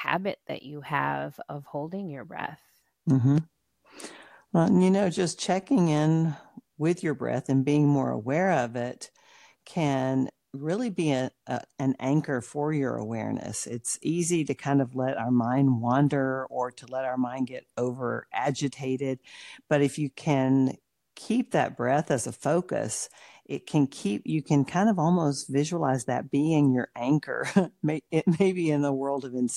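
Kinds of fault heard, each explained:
No technical fault can be heard anywhere in this speech recording. There is nothing here to list under any kind of fault.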